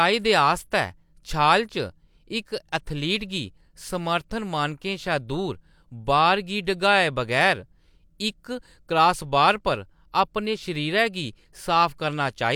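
No faults turn up anywhere in this recording, so there's nothing to flag here.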